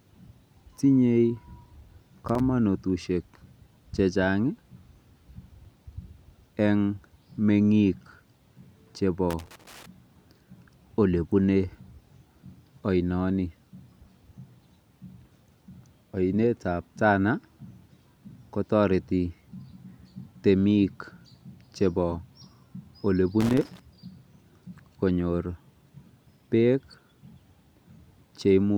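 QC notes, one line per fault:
2.29–2.40 s, 9.30–9.86 s, 23.41–23.79 s: loose connector crackle. Irregular bursts of scratchy crackle over the speech. A worn contact makes and breaks, chopping the signal.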